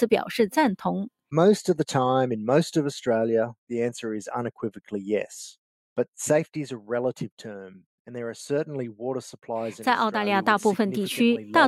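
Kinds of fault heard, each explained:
Nothing here stands out as a technical fault; the sound holds steady the whole way without any glitches worth flagging.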